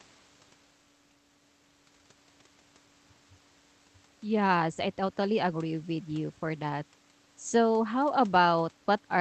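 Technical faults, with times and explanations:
No technical faults are present.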